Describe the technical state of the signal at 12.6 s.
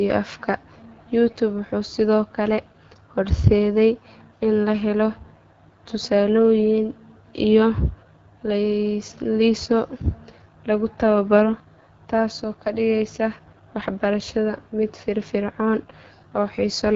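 At 12.6 s you're hearing AMR wideband (HD Voice) codec damage, and it runs through the whole clip, not just that moment. The speech is rebuilt from a pulse-excited vocal tract model up to 6.4 kHz, with synthetic noise filling the band above, and nothing above 7.6 kHz. The rough, raspy grain is plainly audible, which points to one of the codec's lowest modes, something like 8.85 kbit/s.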